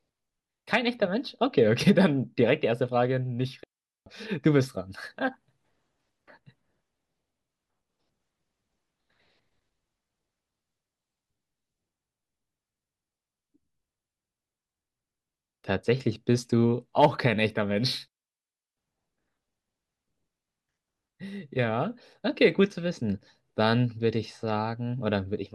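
Speech, interrupted twice by a digital wireless dropout: the audio cuts to near silence from 3.64 to 4.06 s (about 430 ms) and again from 18.08 to 18.77 s (about 690 ms). Each gap is a clean hole with a very short fade and no noise burst on either side. The receiver lost too much data from the digital link and muted its output rather than passing corrupted audio.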